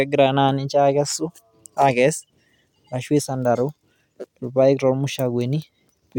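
No technical faults are audible anywhere in the recording.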